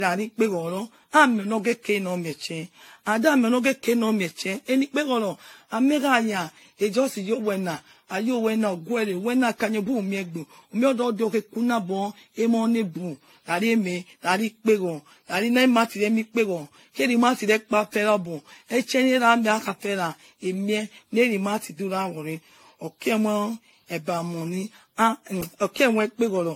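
Generation loss runs throughout: swirly, hollow, smeared speech with blurred attacks and nothing above 16.5 kHz, likely from around seven AAC-LC re-encodings, consistent with 64 kbit/s.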